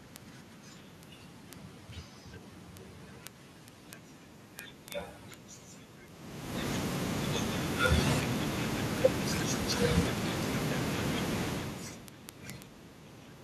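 A steady stream of sharp ticks of uneven strength runs through this speech from 0.12 s to 13.41 s, roughly every 40 ms. These are word clock ticks: the receiver runs on an unlocked clock about 500 ppm off, dropping or repeating one sample per slip.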